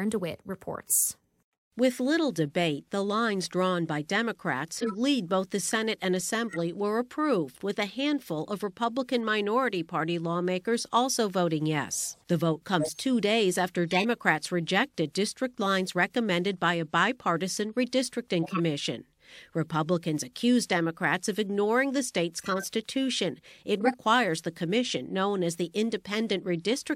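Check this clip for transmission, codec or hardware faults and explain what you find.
The speech carries eight bursts of corrupt frame decoding. They fall at 1.00–1.06 s, 4.72–4.95 s (just before "lead both the"), 6.49–6.60 s, 12.80–13.04 s (just before "days after"), 13.89–14.06 s, 18.43–18.60 s, 22.38–22.65 s (just after "of ignoring the") and 23.73–24.00 s. Damaged compressed frames were decoded anyway. Misread values put energy at the wrong frequencies for one to several frames. Each event sounds like a short chirp or noise burst, peaking between about −20 and −10 dBFS.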